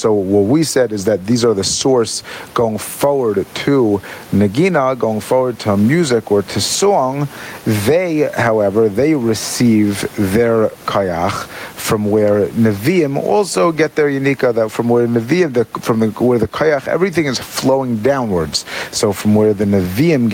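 Gain pumping runs through the whole speech recording. The room noise sits about 35 dB below the speech, and the gain swings by roughly 10 dB. The likely cause is input gain set far too high, with a fast limiter clamping down on each peak, so loud and soft passages sound squashed together. Unlike a noise gate, pumping does not cut the background off in the gaps.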